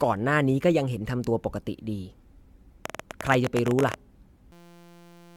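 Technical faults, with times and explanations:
Throughout: generation loss. The speech sounds swirly, hollow and smeared, with softened consonant attacks, more degraded than a 96 kbit/s AAC-LC encode alone would leave. This likely comes from about four successive lossy passes, each requantising on a shifted frame grid so noise and spectral gaps accumulate.
2.86 to 3.95 s: train of clicks. Roughly twenty similar sharp ticks pop over the speech at an uneven pace, about 19.4 per second, peaking around 10 dB above the signal. A likely cause is repeated pulse interference from nearby equipment or a faulty connection or power supply.
4.52 to 5.37 s: system hang loop. The sound collapses into a steady 172 Hz buzz as one 5.8 ms fragment repeats 146 times, which fits a 256-sample buffer cycling while the system froze. About a second of real audio is lost there.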